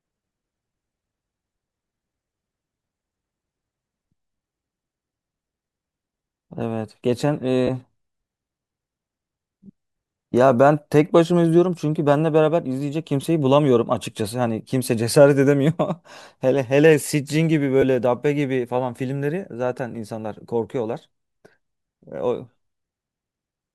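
At 7.67–7.69 s, 13.21–13.24 s and 17.82 s there are lost LE Audio frames, and the LC3 decoder patches each gap of 15, 22.5 and 7.5 ms with a brief noisy smear.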